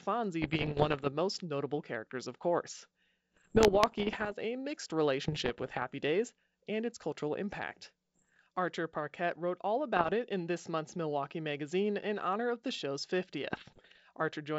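Bit errors on an ADPCM link strike at 0.42–1.09, 3.34–4.32, 5.25–5.85, 8.15–8.37, 9.97–10.13 and 13.51–13.99 s. Roughly 0.7 to 1.5 percent of bits flip. Each flip derails the decoder's step size and predictor. The speech pops and turns rough, with brief level jumps.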